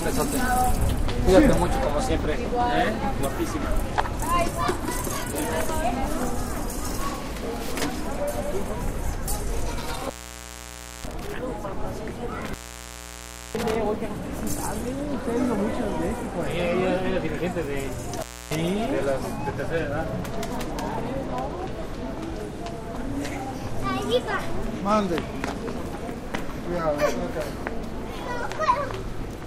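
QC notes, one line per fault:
9.79–11.34 s, 12.32–13.75 s and 18.18–18.55 s, intermittent contact: a loose plug or cable keeps breaking the connection. The sound cuts out for about 0.93 s, 1.01 s and 0.29 s, with crackle at each edge and faint hiss while the line's open.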